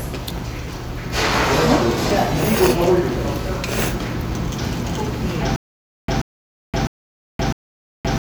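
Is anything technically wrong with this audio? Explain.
Yes. From 5.56 s to the end there is a stutter with silent gaps. A 133 ms burst repeats four times, every 655 ms, with 522 ms of digital silence between. The player likely stalled, replaying its last fragment at each retry. The intended audio is lost.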